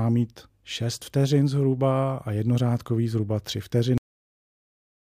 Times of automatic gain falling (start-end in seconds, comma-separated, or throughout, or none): none